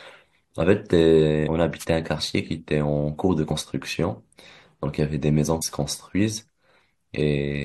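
At 1.47 s the speech jumps forward: compressed frames skipped, roughly seven of them, so around 150 ms of audio never plays. The spacing points to a frame length of about 21.3 ms. Then from 1.78 to 1.85 s there's a wireless microphone noise hit, a short burst of static as the FM radio signal fades and receiver noise swamps the sound. Two more frame skips land at 3.50 s, about two frames or 40 ms lost, and at 5.61 s, about ten frames or 200 ms lost. Each is heard as another jump ahead.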